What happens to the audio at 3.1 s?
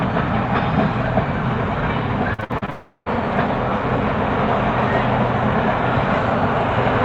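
At 3.08 s the sound comes back after a gap from 2.70 s: a fading buzz stands in for the missing audio, briefly silent, likely a long network dropout.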